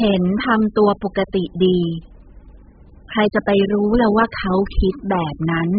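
From the first moment to the last, the speech has that dull, swirly quality you get from heavy AAC compression, likely AAC-LC squeezed down to something like 8 kbps. There's nothing above 5 kHz, so the top end is gone. The encoder is spending almost no bits per frame, so it throws away high bands and quantises what's left coarsely. That leaves sibilants fizzy and sustained vowels with a watery warble.

At about 1.14 s there's a quick pre-echo, a short hiss smeared about 16 ms ahead of a sharp onset. A sudden attack landed late in a transform block, and the coder spread the quantisation noise meant for the loud part across the whole block, including the quiet bit just before it. You hear a little breathy lead-in, and the attack itself loses its snap.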